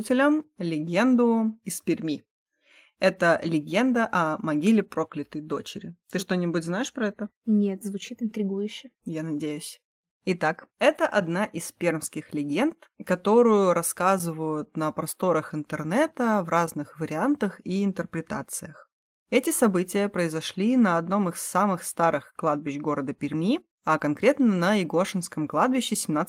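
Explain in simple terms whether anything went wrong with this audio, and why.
Nothing stood out as wrong when listening to this recording of speech, so there is no problem here to explain.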